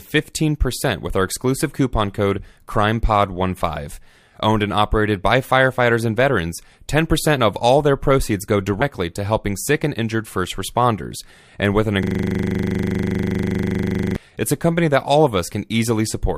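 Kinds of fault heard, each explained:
Compressed frames skipped: At 8.81 s, between "all their proceeds go" and "to helping sick and", the speech jumps forward, losing roughly four frames, around 50 ms of audio, which points to frames missing from the file or rejected by the decoder as damaged. That distinguishes it from a plain dropout or an edit splice, where a gap of silence or a hard discontinuity would be heard.
System hang loop: From 12.03 to 14.16 s, after "with an" and before "it's a company that", a single 40 ms slice of audio repeats exactly, some fifty times. The hardware kept replaying its ring buffer while the system froze, so the short loop fuses into a steady buzz at 25 Hz. Unlike a skip, nothing is lost. Unlike a stutter from network jitter, the repetitions are identical and perfectly regular.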